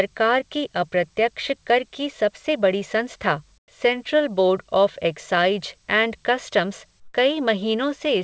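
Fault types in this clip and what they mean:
Comfort noise in place of the background: at 3.58–3.68 s, between "की सबसे बड़ी संस्था" and "सेंट्रल बोर्ड ऑफ़", and again at 7.00–7.14 s, just after "एंड कस्टम्स", the real room tone gives way to a flat, featureless hiss about 16 dB and about 10 dB quieter than the surrounding background. The likely cause is discontinuous transmission: the sender stopped sending during the pause, and the receiver filled the gap with synthetic noise until speech resumed.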